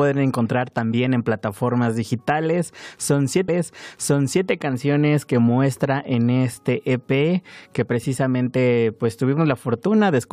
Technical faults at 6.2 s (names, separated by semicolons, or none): none